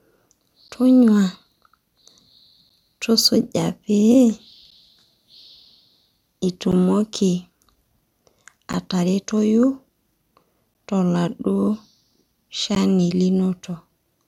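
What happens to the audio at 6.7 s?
At about 6.72 s there's a gap at a join of encoded pieces, an 11.4 ms dropout in the speech. The segments were encoded separately and butted together untrimmed, so encoder delay and final-frame padding left a silence with smeared edges. It recurs every 2 s.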